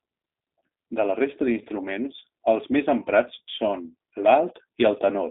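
Speech runs through a G.729 codec for the whole clip. The sound points to an 8 kbit/s VoIP path. It is band-limited to about 250 Hz to 3.7 kHz. The model-based rebuild leaves plainly audible roughness and a synthetic edge.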